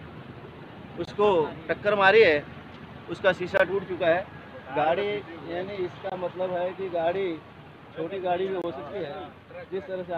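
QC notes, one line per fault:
1.05, 3.57, 6.10 and 8.62 s: gap between chunks. About 21 ms of hard-edged silence at each 2.5 s chunk join, likely from padding or late chunk starts.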